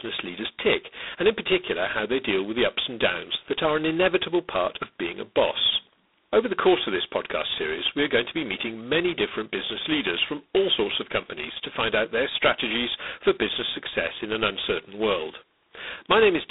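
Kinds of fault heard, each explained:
G.726 ADPCM: The codec sends only a coarsely quantised difference between each sample and an adaptive prediction, so at low rates the quantisation error rides on the speech as a harsh, rasping hiss that swells and fades with its level. Here that grit is heavy, which fits the 16 kbit/s mode at two bits a sample, and the sound is held to a telephone band of about 250 Hz to 3.7 kHz, with nothing above 3.8 kHz.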